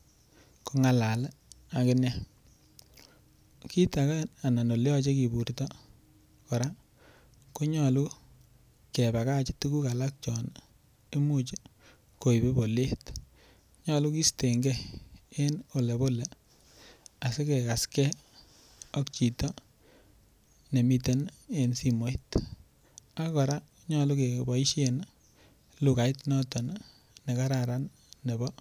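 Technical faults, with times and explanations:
No technical faults can be heard in this recording.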